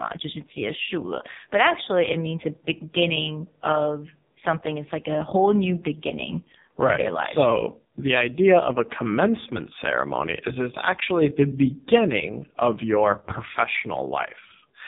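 Throughout the speech, AMR narrowband mobile codec damage is heavy: everything above 3.8 kHz is gone, and the buzzy, synthetic voicing fits AMR-NB's lowest 4.75 kbps mode. A spectrogram shows a flat ceiling at 3.8 kHz with smeared, blocky harmonics beneath it.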